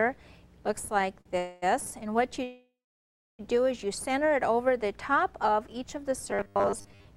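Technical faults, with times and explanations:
0.99–1.32 s, repeated stalls (stutter): four brief stalls, totalling 65 ms and up to 45 ms each, are bridged by continuing the last sound. The jitter buffer keeps running dry, so the audio drags without losing content.
1.38–1.64 s, call audio freeze: a 241 ms hold where the last sound is extended without dropping to silence. Packets were likely held up in transit, then playback resumes where it stopped.
2.43–3.41 s, call audio freeze: a 955 ms gap where the continued sound fades out into about 680 ms of silence. Delayed packets are the likely cause, and the audio resumes intact but late.
6.31–7.07 s, robotic sound from repeated short buffers: a rigid, metallic 100 Hz buzz replaces most of this stretch. This fits a roughly 10 ms buffer being replayed while new audio likely arrived too seldom.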